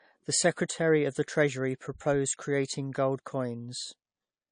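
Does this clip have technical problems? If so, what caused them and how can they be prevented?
Yes. Throughout the speech, nothing sits above 9.8 kHz, and the artefacts of two different codecs are layered and heard together. This is likely transcoding between lossy codecs, an MP3 encode re-encoded as AAC-LC, both at low bitrates. The second codec spends bits reproducing the first one's damage while adding its own, and the lowest cut-off survives. A spectrogram shows a flat ceiling at 9.8 kHz with patchy, holed blocks below. To prevent it, encode once from the original uncompressed source.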